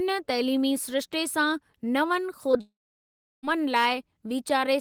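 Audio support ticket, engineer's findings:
Short concealed packet loss at 2.51–2.55 s and 2.57–2.61 s: two brief smears, about 20 ms of audio missing each, bridged by jitter-buffer concealment extrapolating the preceding sound. On a spectrogram, smoothed, repeated harmonics without onset detail. Waveform shows a short, overly regular cycle pattern.

Long network dropout at 2.61–3.45 s: concealment buzz decays within roughly a tenth of a second, then about 0.71 s of silence before the audio resumes with roughly 0.8 s missing. Likely upstream network loss. Spectrogram shows a fading smear, then an empty band. Waveform shows a flat line.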